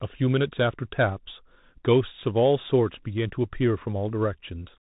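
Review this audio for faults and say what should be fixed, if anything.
The whole speech clip has passed through a Bluetooth CVSD headset codec. The codec sends one bit per sample to step the signal up or down, and the step size adapts. Nothing above 3.8 kHz survives, and the damage is plainly audible: sibilants turn scratchy, loud high sounds outrun the step and distort, and a granular hiss sits under the speech. On a spectrogram the energy stops flat at 3.8 kHz above a speckled noise floor. The waveform looks fuzzy, with a jagged, stair-stepped outline on fast peaks. The sound fits a 64 kbps narrowband headset link. Recording through a wired microphone, or through a headset in its wideband mSBC or LC3 mode, would prevent it.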